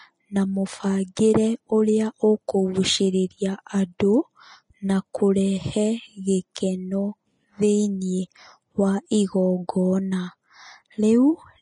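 Throughout the speech there is plainly audible Vorbis compression damage. Nothing reaches above 10.6 kHz. The treble is hissy and grainy, and attacks are smeared. Fine detail has turned into noise. The likely cause is a low-quality Vorbis encode, which fits roughly 30 kbps.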